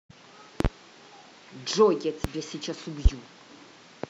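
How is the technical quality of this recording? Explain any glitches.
The speech is marred by three loud pops. The first, from 0.60 to 0.68 s, is a quick double; single ones follow at 2.24–2.28 s and 3.05–3.09 s. Each jumps roughly 25 dB above the speech, which keeps going underneath. The likely culprit is a voltage spike from a plug, switch, static or driver glitch, shaped by downstream circuitry into a sharp thump.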